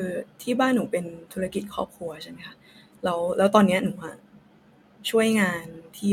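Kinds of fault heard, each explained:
Nothing here counts as a technical fault: the speech carries on without any break, glitch or other problem to point to.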